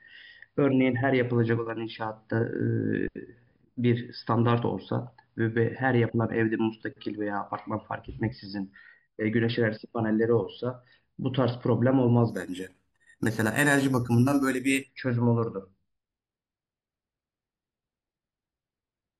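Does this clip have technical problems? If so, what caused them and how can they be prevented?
Yes. Imaging from sample-and-hold upsampling runs from 12.30 to 14.88 s, where this speech carries a bright, metallic fizz riding on top of it. The section was raised from about 11 kHz to 44.1 kHz by simply repeating each sample, with no smoothing filter. Mirror copies of the speech spectrum therefore sit around multiples of the old rate, the first spanning roughly 5.5 to 11 kHz at about -18 dB relative to the speech. Its level follows the speech, and its pitch moves opposite to the speech's pitch. Prevent it by upsampling with a proper interpolation filter that removes everything above the original Nyquist frequency.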